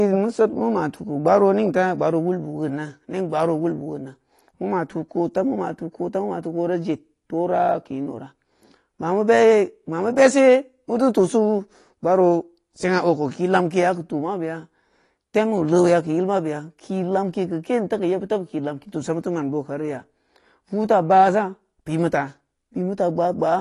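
From the start to the end of the speech there's a hard ceiling at 12 kHz, with nothing above it. The top is dull, the consonants are smeared, and sibilants and held vowels have a watery, fizzy edge. That's most likely AAC compression. AAC-LC at a bitrate this low, which sounds like it fits about 32 kbps, runs short of bits. It pulls the bandwidth down and quantises coarsely, leaving gaps in the spectrum that warble from frame to frame.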